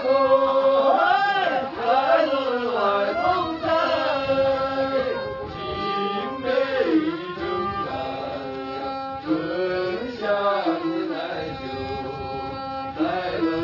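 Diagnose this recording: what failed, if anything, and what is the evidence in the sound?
Nothing in this recording stood out as a failure on listening, so there is no failed stage or evidence in the sound to point to.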